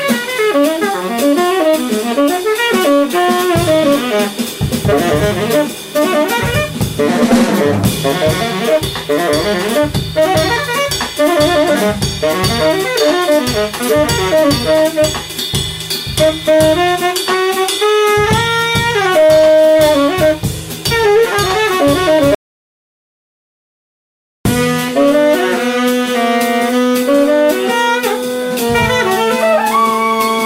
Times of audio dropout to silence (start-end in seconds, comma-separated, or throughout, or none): 22.35-24.45